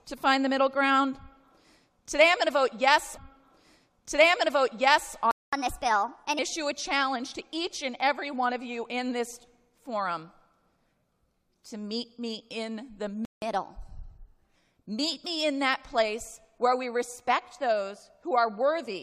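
At 3.16 s a stream segment repeats. About 2.0 s of the sound plays again, running to 5.16 s. The player has fetched or queued the same segment twice. A small blip marks the jump back to the earlier point.

At 5.31 s a playback stall cuts the sound off mid-flow for about 0.22 s. The player likely ran short of data. Silence holds until 5.53 s, then playback resumes. A second stall follows at 13.25 s, lasting about 0.17 s, until 13.42 s.

Each stall is followed by catch-up at higher speed. From 5.53 to 6.39 s the sound runs at 1.25 times normal speed. Pitch rises by roughly four semitones. From 13.42 to 14.55 s it runs at 1.15 times, about two semitones sharp.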